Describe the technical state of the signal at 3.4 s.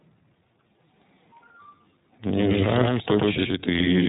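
At 3.4 s it's iLBC codec sound all the way through: nothing above 3.8 kHz, and a plainly rough, synthetic edge from frames coded independently, which fits the 30 ms mode. There's also a doubled audio track from 2.35 s to the end, a second equally loud copy trailing by about a tenth of a second. That's likely a second capture path or a misaligned edit, and it gives a dry, flammy echo with no room tail.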